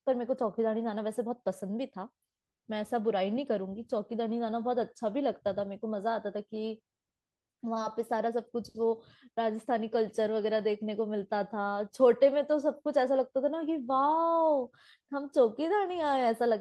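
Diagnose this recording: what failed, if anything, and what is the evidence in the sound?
Nothing failed in this recording.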